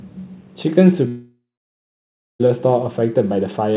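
A long network dropout, most likely a stretch of packets that never reached the receiver, interrupts this speech clip from 1.08 to 2.41 s. About 1.3 s of audio is lost outright. The receiver briefly stretches the last sound into a fading buzz or hiss, then leaves roughly a second of silence before the speech resumes further on, the missing part gone. Throughout, the call's G.711 path leaves nothing above 4 kHz.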